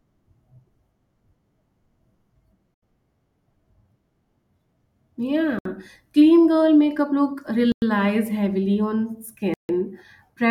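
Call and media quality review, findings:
Bluetooth stall, likely interference draining headset buffer: speech cuts to silence at 2.74, 5.59, 7.72, 9.54 s (83, 65, 100, 152 ms), then resumes.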